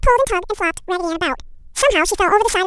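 A speech clip that plays at exactly twice its proper speed from start to finish, with the pitch raised a full octave. The fault is audio read two samples at a time (double speed): the playback side groups each pair of samples into one frame, as if the stream had two channels or samples twice as wide, so every other sample is effectively dropped.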